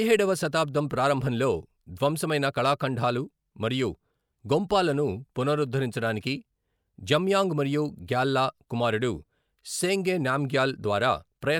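No technical faults are audible.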